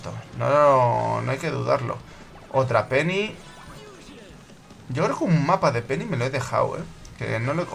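No technical faults are audible.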